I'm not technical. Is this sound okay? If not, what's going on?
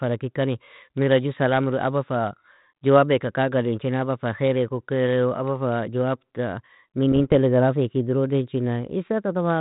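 No. From about 7.12 to 7.33 seconds the speech breaks into pops and a short rough, crackly burst, with the loudness jumping up and down for a moment. These are bit errors on an ADPCM link: the speech travels through G.726 ADPCM, as on a cordless phone, and a small fraction of its bits got flipped. Each wrong bit throws the decoder's running guess off, so the damage rings on briefly instead of being a single click.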